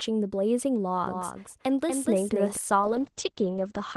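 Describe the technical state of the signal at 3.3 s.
At 3.3 s the speech is inside a call bitrate drop that runs from 2.81 s to 3.97 s. The encoder falls from 32 to 12 kbps and narrows the band from 20 kHz to 8 kHz, giving a muffled, watery, coarsely coded sound that stays continuous, unlike the gaps of packet loss.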